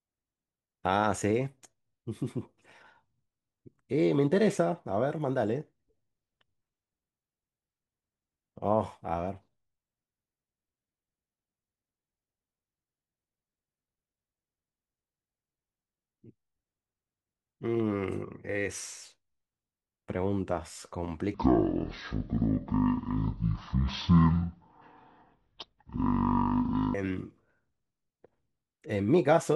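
From about 21.34 s to 26.94 s the speech suddenly drags at half speed and drops a full octave, 12 semitones down, which is the classic stereo read as mono problem. The left and right samples, which should be split into two channels, get read back to back as one stream, so every moment takes twice as long. You can also catch a faint mirrored copy of the sound up in the top half of the spectrum.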